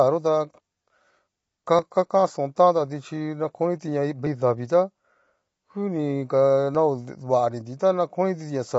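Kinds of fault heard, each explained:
Low-delay AAC compression: Throughout the clip the speech sounds rough and grainy, with a hazy noise filling the spaces between the voice harmonics. This is likely the work of AAC-ELD, the low-delay codec used in video calls. Its very short frames separate pitch harmonics poorly, and the damage fits a bitrate near 24 kbps. On a spectrogram the harmonic stripes look smeared and speckled, and all energy stops at a flat ceiling near 7.7 kHz.
Audio missing between chunks: There are two brief skips, at 1.79 s and 6.75 s. At each, roughly 20 ms of speech vanishes and the sound on either side is joined directly with no silence. The likely cause is audio handled in blocks, with a small piece dropped at each handover, and the spacing fits chunks of about 2.5 s. The waveform shows an abrupt step at each point, and the spectrogram shows a thin vertical seam where the content jumps.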